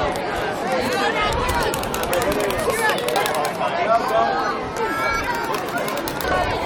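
At 0.62, 3.15 and 6.12 s, brief blips from damaged data in a compressed stream: corrupted bytes make the decoder misread frames and resync. Each lasts about 10 to 14 ms, showing as a thin broadband vertical streak on a spectrogram and an abrupt discontinuity in the waveform.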